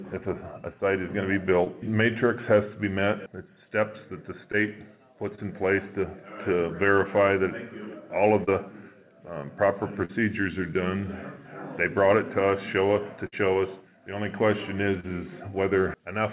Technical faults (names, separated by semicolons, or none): short concealed packet loss; burst of packet loss